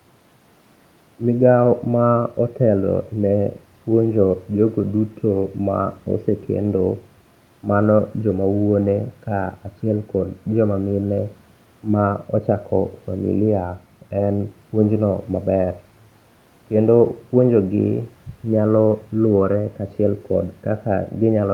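Speech recording with no technical faults, the only background being ordinary room noise about 37 dB below the speech.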